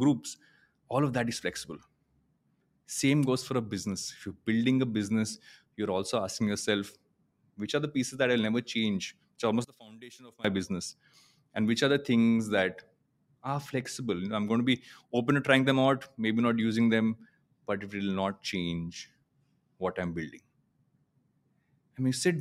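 From 9.65 to 10.45 s speech falls about 26 dB to a faint residue, likely one channel inverted cancelling in mono; waveform shrinks.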